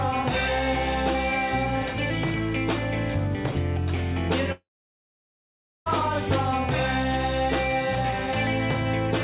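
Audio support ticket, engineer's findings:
Gap from 4.52 to 5.88 s. Last sound smeared into a brief fading buzz, then about 1.2 s of silence. Audio resumes with that stretch missing. Likely a long network dropout: packets lost, jitter buffer concealed briefly, then muted. Band-limited to 4 kHz throughout, consistent with G.711 A-law.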